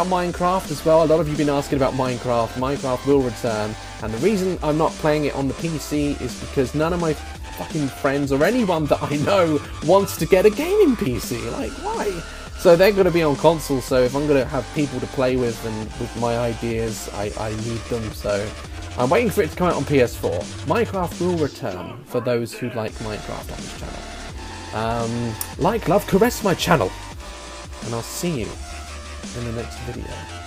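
No technical faults can be heard anywhere in the recording.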